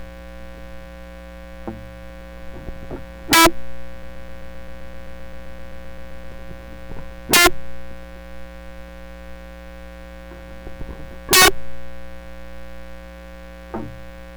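A music clip with two kinds of fault. Integer overflow strikes three times: 3.33 to 3.46 s, 7.33 to 7.47 s and 11.33 to 11.48 s. The level there is pushed about 16, 22 and 20 dB past full scale. The samples are not held at the ceiling. They wrap around to the opposite sign. Each peak jumps across the whole range. The result is violent cracking, far harsher than ordinary clipping. From 4.03 to 6.32 s there is a broken-record loop. One 130 ms fragment repeats exactly, 18 times in a row. It stutters like a stuck record. The music that should fill those two-odd seconds never plays. The likely cause is a stalled player, encoder or stream that kept resending its last buffered piece.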